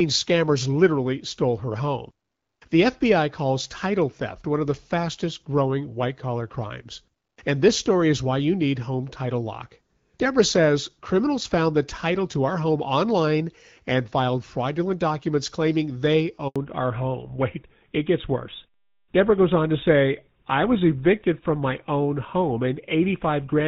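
At 16.48 s the call is moved from one network to another, and a handover gap opens: for about 80 ms, until 16.56 s, no speech frames arrive. The speech cuts out within a few tens of milliseconds and falls silent until the new link carries audio again. Whatever was said in that brief window is lost, heard as a short hole in the speech stream.

From 16.56 s to the end, the call falls back to narrowband. The new link stops carrying HD Voice and switches to an older narrowband codec, with a sound that fits GSM full rate at 13 kbit/s. Before this point, the wideband coding shows only light damage, consistent with AMR-WB at about 12.65 kbit/s. After it, nothing above 4 kHz remains, so the speech turns duller and rougher.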